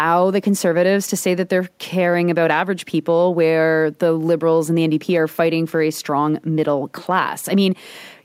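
Nothing in this speech recording stands out as a technical problem; there's no moment where something audibly goes wrong.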